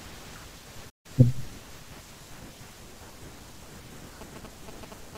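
At 0.89 s the speech cuts out and stays silent until 1.06 s, a playback stall of about 150 ms, likely the player running short of data or its thread being held up. On a waveform it shows as a flat gap; a spectrogram shows a blank vertical band.

From 4.21 s to the end, GSM signalling bursts from a nearby phone are picked up and rectified, giving a galloping run of short buzzes at a 217 Hz repetition rate, roughly 10 dB below the speech. A spectrogram shows evenly spaced vertical striations and harmonic lines spaced 217 Hz apart.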